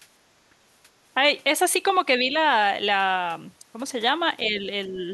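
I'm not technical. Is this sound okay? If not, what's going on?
No, there are three kinds of problems, all from the echo canceller, the part of a call system that stops the other person's voice from bouncing back through your speaker and microphone.

Background gated by the echo canceller, at 0.53 to 0.61 s. The room sound briefly dips for a moment and then comes back. While the loudspeaker was playing, the echo canceller turned the microphone down to block any echo, and it took the quiet room sound with it. The result is a short hole in the background.

Speech suppressed in double talk, at 2.19 to 2.34 s, 4.49 to 4.66 s and 4.87 to 5.08 s. Each time, the voice turns slightly quieter for a fraction of a second and then recovers. The likely cause is both people talking at once. The echo canceller couldn't tell this voice apart from the other side's sound coming out of the speaker, so it turned everything down together, and this talker's voice lost some of its strength.

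Other side's voice leaking through, at 4.87 to 4.92 s. A very faint scrap of a second voice slips in underneath for an instant. The likely cause is the other person's voice playing from the loudspeaker and reaching the microphone, with the echo canceller failing to remove all of it. This happens during the last dip in the main voice.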